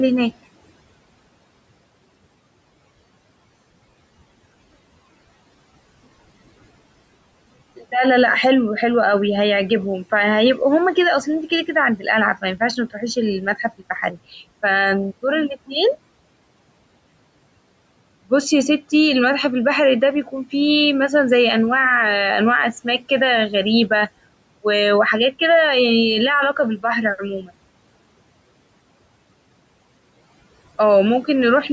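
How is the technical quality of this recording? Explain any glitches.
One glitch stands out, near the end of the recording, against a background of room noise that sits about 21 dB below the speech and a call-microphone chain with nothing above 8 kHz.

From 27.41 to 27.51 s, about a tenth of a second, there is speech cut by the noise suppressor. The suppressor mistook a soft stretch of speech for background and pulled it down along with the noise, by about 13 dB at its deepest. The sound turns faint and swallowed rather than vanishing. That sets it apart from a network dropout, which would leave a hard gap, a click or a synthetic-sounding fill instead of a quieter stretch.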